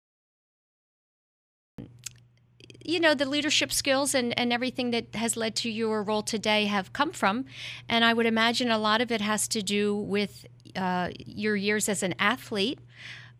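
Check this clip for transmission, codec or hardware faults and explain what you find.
One fault is present, a cut-off start. The recording or stream began capturing late, so the first 1.78 s are digital silence. At 1.78 s the speech enters abruptly partway through a sound, with no natural attack or fade-in, because its true onset was never captured.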